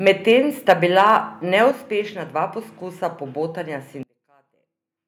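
A speech clip. Harsh, crackling edges sit on the loudest peaks at 0.07 to 0.32 s, 0.69 to 0.72 s and 0.98 to 1.17 s. This is likely microphone overload. The peaks run about 3 to 4 dB past the converter's limit, so their tops are sheared flat. The middle burst is the worst, with roughly a sixth of its samples clipped. At 0.71 s, right on that distorted burst, voice and background drop together by about 2 dB. That sudden step points to the microphone volume being stepped down, likely by call software reacting to the clipping. From 4.03 s to the end, the sound collapses by about 34 dB. Only a faint residue remains. This fits one channel inverted, likely in a near-identical stereo pair, so the shared signal cancels when summed to mono.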